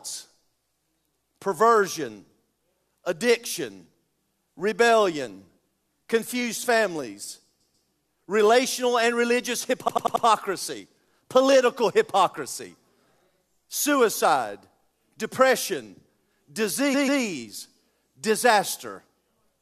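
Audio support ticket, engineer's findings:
Speech stutters. Repeated frames at 7.60–7.87 s after "confused families" (139 ms block, twice more), 9.87–10.24 s after "families relational and religious" (93 ms block, four times), and 16.93–17.21 s (139 ms, twice). Compressed frames were resent, fitting roughly 23 ms frames; the audio is lengthened by the repeats.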